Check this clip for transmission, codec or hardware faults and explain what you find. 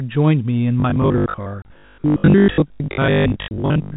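Two transmission faults are present, heard through a 4 kHz telephone band consistent with G.711 coding.

Robotic sound from repeated short buffers, 0.8 s to the end: roughly half the audio is replaced by repeats, likely of 20 ms buffers, imposing a rigid 50 Hz metallic buzz rather than gaps.

Packet loss filled with silence at 1.62 s and 3.48 s: each hole lasts 30 ms, fitting one lost packet, and is hard-edged rather than buzzing.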